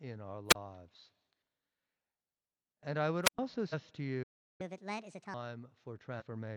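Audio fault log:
0.49–0.55 s and 3.23–3.39 s (the second just after "I would"): wireless microphone squelch dropout. The analogue FM radio link fades. Hiss and static swell briefly, then the receiver's squelch cuts the output to near silence for about 31 ms and then about 110 ms before the speech comes back. That rising static ahead of the hole sets it apart from a playback stall, which goes silent abruptly with no warning noise.
3.69–3.74 s and 6.17–6.23 s: damaged data in a compressed stream. Corrupted bytes in the encoded stream make the decoder misread its frames, lose sync and search for the next valid header. Each spot comes out as a short glitch lasting roughly 50–60 ms. Unlike a squelch dropout, there is no rising hiss ahead of it.
4.23–4.61 s: playback stall. The speech stops mid-flow and the output stays silent for about 365 ms. This is most likely because the player ran short of buffered data and had nothing to send until it recovered. 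The cut is sudden and dead quiet, with no static swelling beforehand, so it is not a radio dropout. It lasts far longer than the brief glitch of a corrupt frame.
4.61–5.34 s: catch-up at higher speed. Right after the stall the player works through its backlog by resampling at 1.5 times normal speed. The speech sounds hurried and raised in pitch by about seven semitones for roughly three quarters of a second, then snaps back to normal rate. Because speed and pitch rise together, this sounds like a sped-up tape rather than a time-stretch, and it follows directly on the silent gap.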